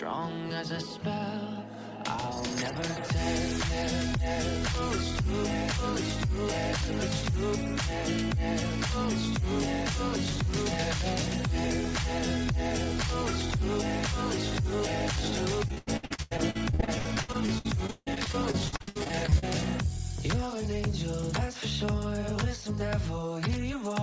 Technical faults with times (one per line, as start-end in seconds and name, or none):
15.68-19.44 repeated packet loss (robotic sound)